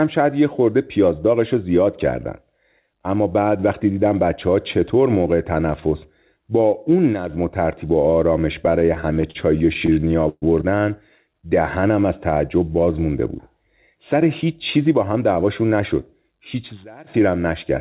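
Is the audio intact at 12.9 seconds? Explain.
Yes, the speech at 12.9 seconds is intact, with no dropout, glitch or other fault at that moment.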